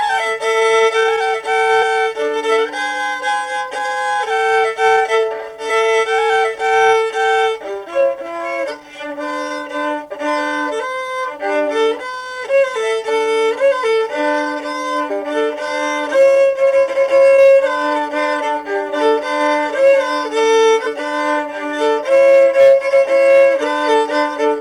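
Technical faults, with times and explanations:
1.81–1.83 s, 10.10 s, 15.10 s, 20.85–20.87 s: damaged data in a compressed stream. Brief glitches occur where corrupted frames make the decoder lose sync and resynchronise.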